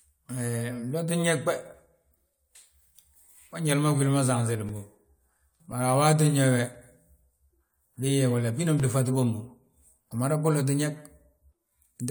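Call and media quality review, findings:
Periodic USB or driver dropouts, 4.69–9.83 s, starting just after "ma sanselim." Regular ticks in speech about every 1.02 s, roughly seven. Each gap is around 2 ms of silence, consistent with a background task briefly stalling the USB bus or audio driver. Waveform: brief near-silent notches in active signal. Spectrogram: thin, evenly spaced vertical broadband lines. Probable component: capture driver or USB host controller scheduling.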